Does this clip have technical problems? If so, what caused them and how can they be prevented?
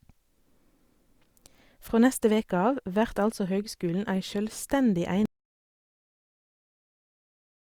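Yes. An audio dropout to silence starts at 5.26 s and runs to the end. The speech cuts off abruptly and the rest is silence with no room tone, because the input was likely lost through a disconnected device, failed link or accidental mute while the recorder kept writing silence. Securing connections, avoiding stray mute controls and monitoring input levels throughout recording would prevent it.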